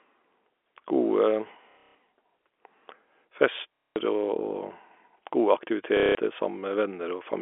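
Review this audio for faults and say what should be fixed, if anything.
Packet loss with last packet repeated occurs three times, at 1.71–1.95 s, 3.76–3.96 s and 5.97–6.15 s. Each time the stream drops out for about 180 to 210 ms, and the receiver replays the last good packet until fresh data arrives. The replayed segments don't align with the pitch period, and the sustained runs buzz at a rate that fits 30 ms packets, roughly 33 Hz. The result is a short robotic stutter. The first event is scattered over 240 ms, with its longest continuous run at 150 ms. The G.711 telephone band of 300 Hz to 3.4 kHz around these gaps sounds as expected for a phone line. To prevent this, reduce loss on the network path and replace repeat-last-packet concealment with pitch-synchronous concealment, or add forward error correction.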